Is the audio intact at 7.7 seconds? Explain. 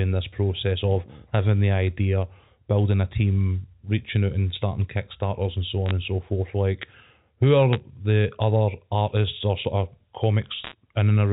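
No. Bit errors on a digital phone line corrupt the audio from 7.73 to 7.76 s, just before "the other artists or". On this G.711 mu-law line, a few bits in every thousand arrive flipped, and each flip changes one 8-bit sample. When a sign bit or high-order bit is hit, that sample jumps far from its neighbours, so the brief stretch carries sharp ticks and a short burst of crackle over the unchanged speech.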